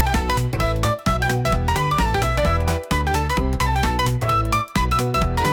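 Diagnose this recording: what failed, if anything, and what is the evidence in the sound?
Storage-side problem: file tags played as audio. A hard-edged rasp at 0.0 s is text metadata being read as samples, which throws the waveform off to one side.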